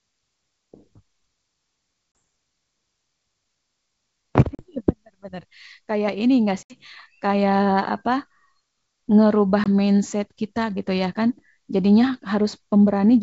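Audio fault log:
2.18 s, 4.55–4.63 s, 6.63–6.77 s, 9.64–9.68 s: packet loss on an ADPCM call. Gaps of 30, 40, 70 and 20 ms are filled with silence. The wideband sound, consistent with G.722 at 64 kbit/s, resumes slightly distorted as the decoder's predictor and step size resynchronise. On a waveform each gap is a hard-edged flat line. On a spectrogram each is a blank vertical stripe.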